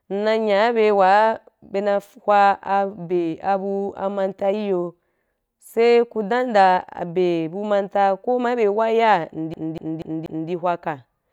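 Speech clip where the disc gets stuck on one turn from 9.54 to 10.50 s: a scratch keeps throwing the laser back, so a 0.24 s fragment repeats four times in an even, clipped stutter.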